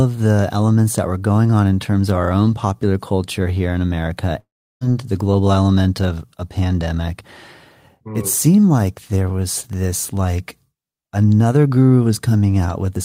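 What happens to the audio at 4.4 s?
A long network dropout runs from 4.39 to 4.83 s. The speech is cut off and the last sound carries on as a fading buzz, then gives way to about 0.35 s of silence. The likely cause is that the incoming audio stopped arriving, so the receiver stretched what it last had before going quiet. Speech returns at "the global element of", with roughly 0.42 s of the original never played.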